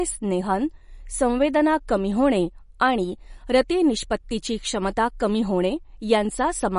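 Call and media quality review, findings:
MP3 compression throughout: watery, swirly speech; spectrogram shows flat treble ceiling at 10.6 kHz, flickering upper bins. Likely low-bitrate MP3 encode, fits about 40 kbps.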